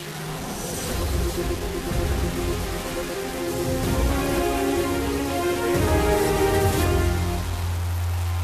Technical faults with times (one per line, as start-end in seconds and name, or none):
0.00-8.43 low bit depth without dither